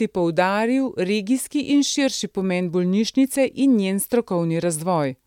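No technical faults are audible anywhere in the speech.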